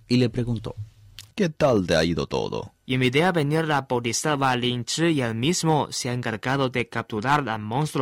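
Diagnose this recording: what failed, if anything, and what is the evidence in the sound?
Hard clipping at the converter or sample-format stage: speech peaks exceed full scale by about 2 to 6 dB and are sliced flat, crackling at 0.13–0.24, 1.62–2.39, 2.94–4.65, 5.69–5.81, 6.27–7.39 s and 8.01 s. The waveform shows squared tops, and the spectrogram shows bright vertical harmonic streaks reaching high frequencies.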